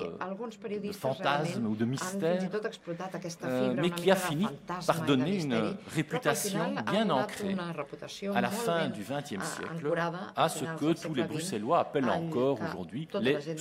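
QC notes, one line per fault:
0.00–3.00 s, de-emphasis applied wrongly: a treble cut meant to reverse pre-emphasis hits unboosted or already-cut sound. Highs slope down about 8 dB by 10 kHz, so it sounds muffled.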